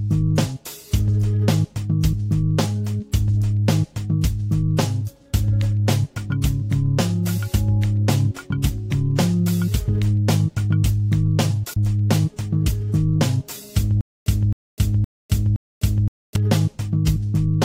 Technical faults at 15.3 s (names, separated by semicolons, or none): stutter with silent gaps